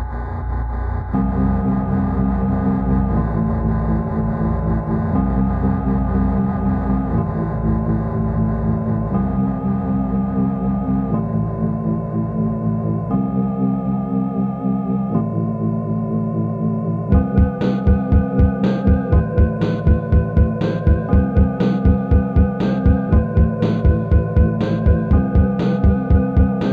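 Nothing stood out as a technical problem on listening to this audio.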